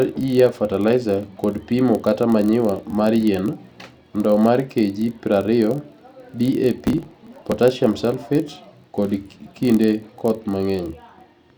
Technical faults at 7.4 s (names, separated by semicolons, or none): block size mismatch (padded); processor overload crackle